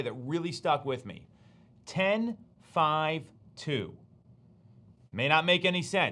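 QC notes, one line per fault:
1.9–3.9 s, resampler restarted on every block: each 100 ms block converted from 48 kHz to 24 kHz in isolation leaves edge errors, giving steady 10 Hz ticks under the speech, with no gaps or missing audio as dropouts would cause.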